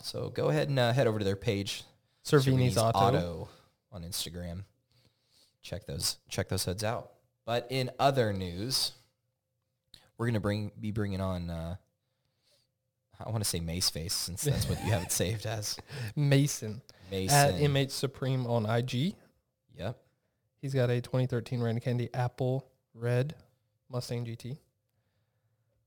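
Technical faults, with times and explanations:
Throughout, crude rate conversion: a gritty, inharmonic fizz, roughly 20 dB below the speech, tracks louder and brighter passages. Samples appear repeated rather than filtered, fitting a 44.1 kHz to 48 kHz change, so the recurring error pattern creates tones unrelated to the speech.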